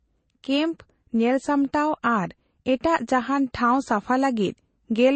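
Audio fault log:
Throughout: transcoding between lossy codecs. The speech is band-limited with nothing above about 8.3 kHz, and two distinct sets of coding artefacts sit on top of each other. This likely comes from Vorbis encoding at roughly 48 kbit/s followed by MP3 at roughly 35 kbit/s. The second encoder wastes bits reproducing the first one's errors, adds its own, and the lower band edge carries through.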